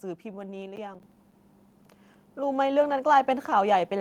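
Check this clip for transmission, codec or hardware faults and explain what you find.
Two faults are audible, and they overlap in the first second and a half of this speech clip.

From 0.76 to 1.32 s there is processor overload crackle. The processor falls behind and misses buffer deadlines again and again. Each miss is filled with silence, so the signal is punched with short hard-edged dropouts. The gaps sound like buffers of around 10 ms, and there are only a handful of them. Together they sound like a gritty, tearing crackle over the speech, and it stops once the load clears.

At 1.02 s the microphone volume is stepped up. The call software judges the input too quiet and raises the device's input volume in one jump of about 7 dB. This is not a gradual gain ride, so the speech and the room background get louder together, instantly. The step falls right inside the crackle burst, so the level jump arrives mid-crackle, and the rest of the clip continues at the higher level.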